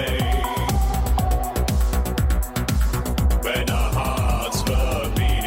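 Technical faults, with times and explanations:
2.86–5.21 s, call bitrate drop: the connection's bandwidth estimate fell and the encoder coded far more coarsely, likely from about 96 to 22 kbps, leaving the sound rough.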